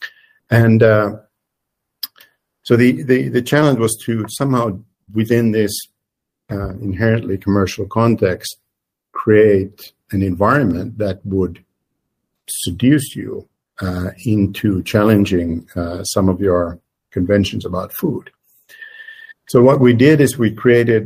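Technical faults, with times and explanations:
10.71 s, dropped samples: a single sharp click, with a thin vertical line running straight up the spectrum at that instant. The click most likely comes from a fraction of a millisecond of samples going missing from the stream, so the waveform leaps from one value to a later one with nothing in between. That sudden step is what snaps out as the click. The gap is far too brief to take away any audible sound, leaving only that one tick.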